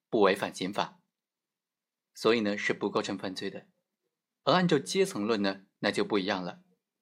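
No technical faults are audible.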